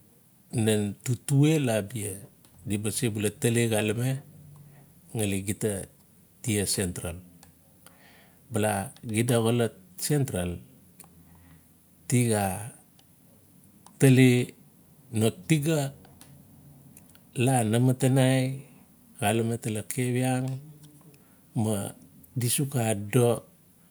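No technical faults can be heard anywhere in the recording; the signal holds steady and continuous over its whole duration.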